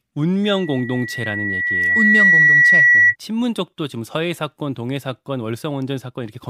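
A microphone picks up its own loudspeaker, so from 0.43 to 3.16 s a loudspeaker feedback squeal swells over about two seconds into a 1.9 kHz tone roughly 10 dB above the speech.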